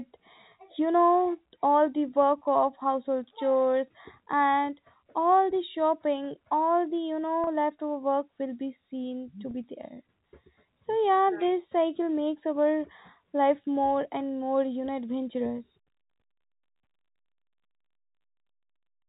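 At 7.44 to 7.47 s and again right after "will be seen to" at 9.51 to 9.54 s, there's packet loss with pitch repetition. About 30 ms goes missing each time, likely three 10 ms packets, and the receiver loops the last pitch period, so you hear a brief held, buzzy smear over the telephone-band G.711 audio.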